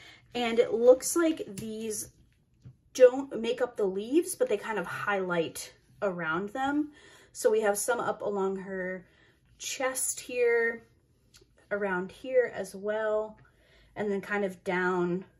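Throughout the clip, the sound was likely squeezed through MP2 compression at a low rate, fitting roughly 80 kbps, which starves the upper sub-bands of bits and switches them off. The audio is dull, with bands flickering in and out and a gurgling, granular roughness.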